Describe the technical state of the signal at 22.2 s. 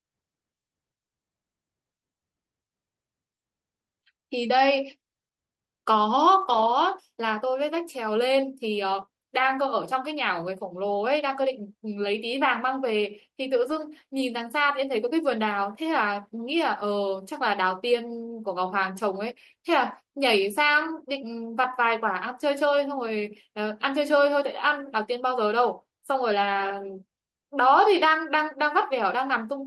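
At 22.23 to 22.29 s there is a lost packet rebuilt from error correction: about 40 ms, which fits two 20 ms packets, replayed from the low-bitrate copies carried in the following packets. Unlike a dropout or concealment, nothing goes silent or smeared; the sound just turns briefly rougher and noisier.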